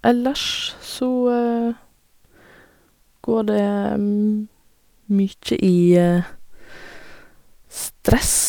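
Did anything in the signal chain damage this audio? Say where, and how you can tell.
No, nothing along the signal chain has left an audible mark on this speech recording. Listening across the whole clip, there is no point where a stage in the chain can be heard acting on the sound.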